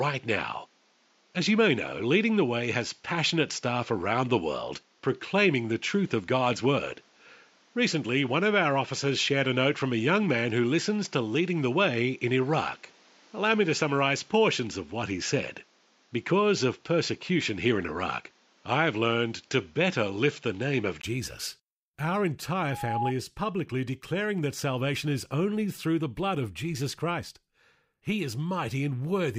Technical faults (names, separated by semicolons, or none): input switched to a poorer device; loudspeaker feedback squeal